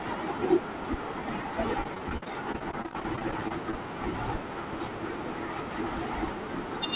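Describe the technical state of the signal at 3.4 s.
At 3.4 s the audio is inside a stretch of repeated packet loss (robotic sound) running from 1.84 to 3.74 s. About twenty short holes, the longest around 44 ms, are each patched by stretching the preceding sound, so the speech turns choppy with pieces missing. That makes it a rapid, recurring pattern rather than a single isolated dropout. Throughout, nothing reaches above 4 kHz, which fits a narrowband G.711-style call codec.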